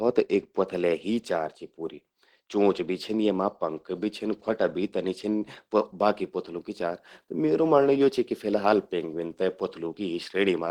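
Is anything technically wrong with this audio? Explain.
No, nothing in this speech recording stood out as a technical problem on listening.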